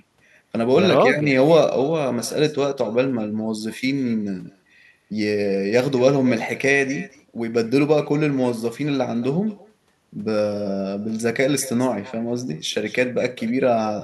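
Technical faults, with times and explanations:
throughout, echo with no canceller: every phrase returns about a fifth of a second later as a thin copy about 19 dB down, from a far-end loudspeaker leaking into an uncancelled microphone.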